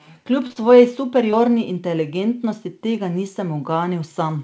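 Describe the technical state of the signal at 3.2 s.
At 3.2 s the speech is intact, with no dropout, glitch or distortion; it has passed through a call path whose codec fits G.722, which is why nothing sounds above 8 kHz.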